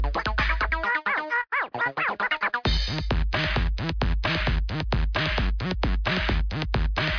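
Nothing is technically wrong with this audio.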